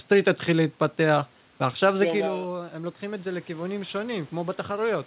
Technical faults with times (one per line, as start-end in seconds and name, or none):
2.22-5.07 automatic gain rising